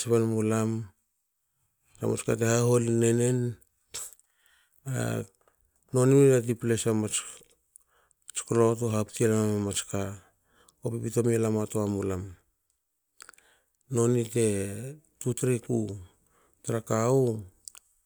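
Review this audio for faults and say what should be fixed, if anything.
No faults turn up anywhere in this speech recording. Nothing needs to be fixed.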